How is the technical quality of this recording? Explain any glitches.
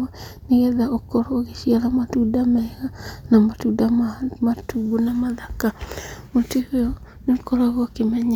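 Nothing here glitches: no dropouts, clicks or other technical faults turn up anywhere in the recording.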